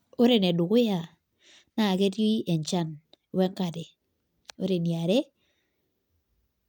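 No technical faults occur anywhere in the speech, so there is nothing to describe in time order.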